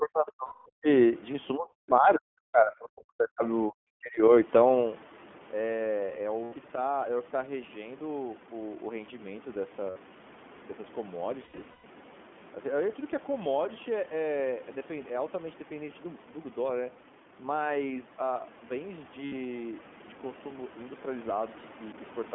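The whole clip goes through the iLBC codec. The speech is confined to roughly 200 Hz to 3.4 kHz and sounds slightly rough and synthetic throughout, which fits iLBC's 20 ms frames at 15.2 kbps. That even, steady coloration sets it apart from the brief local events below.

From 0.0 to 0.88 s, 1.55 to 3.43 s and 3.68 to 4.22 s, the speech dips by as much as about 40 dB. This is likely speech suppressed in double talk, with an echo canceller turning down the near talker while the far side spoke.

Lost iLBC frames appear at 0.46 to 0.68 s (200 ms), 6.44 s (80 ms), 9.90 s (60 ms), 11.44 to 11.85 s, and 19.26 s (60 ms). In the 11.44 to 11.85 s stretch about 300 ms is missing in pieces, the longest run around 150 ms. Each gap becomes a held, slightly buzzy or breathy vowel-like sound, and the voice is right again almost at once afterwards. A simple dropout would leave silence instead.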